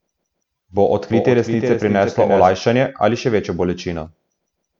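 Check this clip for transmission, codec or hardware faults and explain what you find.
One fault is audible, a doubled audio track from 1.1 to 2.5 s. A full-band copy of the speech trails by about 0.4 s, somewhat quieter, likely from a second, slower capture path mixed in. It starts and stops abruptly with no reverberant decay. A spectrogram shows each pattern repeated and shifted right, and the waveform shows overlapping envelopes.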